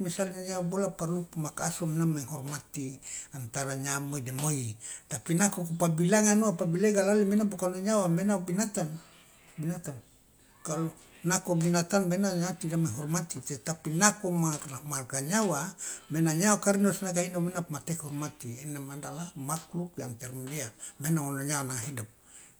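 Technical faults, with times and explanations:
6.98 s, dropped samples: a single sharp click. A tiny stretch of the stream, roughly a fraction of a millisecond, is likely missing. The waveform leaps straight to a later value. That step is heard as a click. It shows as a thin vertical line across the spectrum.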